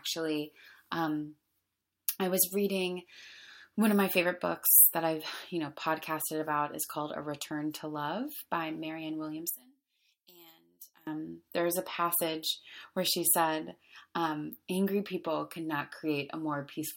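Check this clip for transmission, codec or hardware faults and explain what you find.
One fault shows up. From 9.50 to 11.07 s the speech drops about 17 dB to a faint copy, likely one channel inverted, so the shared centre cancels when summed to mono.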